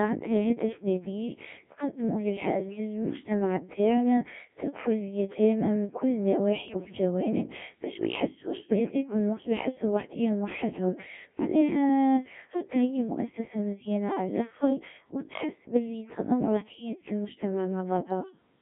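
From the start the speech has the robotic buzz of the Codec 2 vocoder, which fits roughly 1.3 kbit/s. The decoder rebuilds the speech from sine waves within a 200 Hz to 3.5 kHz band. Bit errors on digital voice radio scramble the frame parameters at 2.53–2.80, 6.68–6.92, 8.56–8.79 and 14.60–14.70 s, producing pitch jumps and warbly gibberish, worst around 6.7 s.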